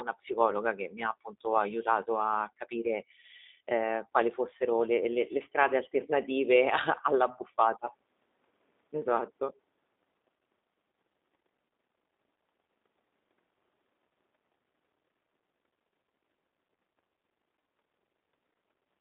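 G.729 codec damage runs through the whole recording, and it is plainly audible. The speech has been rebuilt from a vocal tract filter and pitch predictor driven by a few pulses per frame, rather than carried as a waveform, which fits an 8 kbit/s G.729A stream. That gives the voice a rough, slightly synthetic edge. The line band sits between 250 Hz and 3.7 kHz, so the speech sounds thin, with no low body and nothing above 3.7 kHz.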